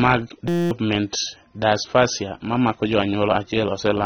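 From the start and throughout, the speech sounds dull and smeared. Nothing is heard above about 6.3 kHz. Sibilants turn fizzy and sustained sounds warble. This is plainly audible codec damage, likely from AAC compression at a low bitrate. AAC-LC quantises each frame's frequency lines against a hearing model. When bits are scarce, it drops the top of the spectrum and thins out the rest. The level of damage here fits a rate somewhere in the high twenties of kbps.

From 0.48 s to 0.71 s, the speech gives way to a steady buzz. This is a system hang loop. The playback system froze while the sound hardware kept replaying the same stretch of buffer. Each loop lasts 5.8 ms, so the repeats fuse into a tone at 172 Hz. That fits a 256-sample buffer. The same fragment cycles dozens of times, and about a fifth of a second of speech is lost.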